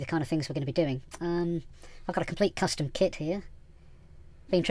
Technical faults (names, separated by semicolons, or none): wrong sample rate